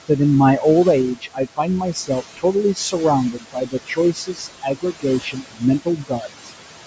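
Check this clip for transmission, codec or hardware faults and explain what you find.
The faults here come from noise suppression set too aggressively on this speech; the room noise, about 12 dB below the speech, is ordinary background.

Overdone noise removal runs throughout. The suppressor pushes bands near its noise estimate almost to nothing, leaving near-silent gaps with twinkling specks.

Noise suppressor artifacts are also present throughout. Frame-by-frame gain cuts noise by about 18 dB between phrases and lets it return underneath them.

Speech cut by the noise suppressor occurs from 1.15 to 2.10 s (about 17 dB deep, roughly 0.4 s affected), from 2.75 to 2.94 s (about 10 dB, roughly 0.1 s), from 3.32 to 5.63 s (about 18 dB, around a second in total), and from 5.85 to 6.53 s (about 19 dB, roughly 0.4 s). Quiet speech was mistaken for noise, so soft consonants and endings sound swallowed or faint. 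The call microphone's band limit, with nothing above 8 kHz, is expected.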